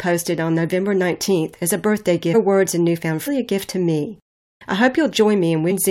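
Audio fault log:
2.33 s, damaged data in a compressed stream: a brief glitch between "as a birthday" and "words and newfound", where the decoder reads corrupted frame bytes as garbage.
3.26 s, damaged data in a compressed stream: a similar short blip just after "words and newfound", as the decoder loses frame sync and searches for the next valid header.
5.70 s, damaged data in a compressed stream: one more short glitch near the end of the clip, from the same kind of corrupted frame.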